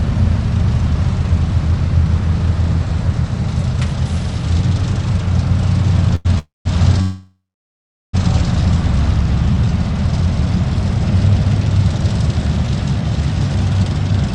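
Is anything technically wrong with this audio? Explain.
Yes, there are three interruptions in the audio's timing.

A short stall from a late packet runs from 6.15 to 6.27 s. A packet had not arrived when it was due, so the receiver's jitter buffer ran dry and it stretched the last sound for about 93 ms. Playback then resumed from the same point, so nothing is lost, but the sound is held unnaturally long with a faint buzzy smear. Everything after it plays 93 ms later.

Two call audio freezes follow, from 6.39 to 6.67 s and from 7.01 to 8.15 s. The likely cause is packets held up in transit, draining the jitter buffer. In each, the last sound carries on as a fading buzz and then drops out, for about 170 ms in the first and 740 ms in the second. The audio then continues where it stopped, with gaps of 265 ms and 1.12 s inserted and nothing missing.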